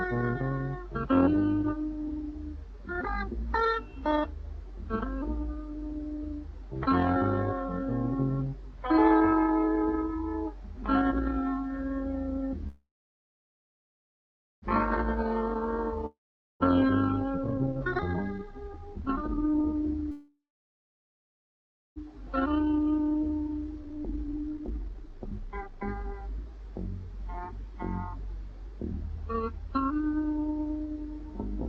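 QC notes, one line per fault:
12.67–14.65 s, call audio freeze: packets were likely held up in transit and the jitter buffer ran dry, so the receiver stretched the last sound into a short fading buzz and then about 1.75 s of silence, filling roughly 1.95 s in all. Nothing is lost; the sound resumes where it stopped, now running about 1.95 s later. 20.11–21.99 s, the same again: about 1.55 s of silence within a 1.85 s fill, adding about 1.85 s of delay with nothing missing.
16.06–16.63 s, long network dropout: a stretch of audio likely never arrived. The receiver continued the last sound as a fading hiss for about a tenth of a second, then about 0.44 s of silence, and the audio returns further on with about 0.54 s skipped. Unlike the freezes, the gap here replaces lost material rather than just pausing it.
17.35–20.05 s and 22.27–29.71 s, jitter buffer speed-up: with the buffer holding far more audio than its target after the freezes, the receiver cut short pitch-period-sized pieces repeatedly to shed delay, about two seconds in each run. 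Pitch stays unchanged but the sound rushes, at 167% speed in the first run and a milder 126% across the longer second run.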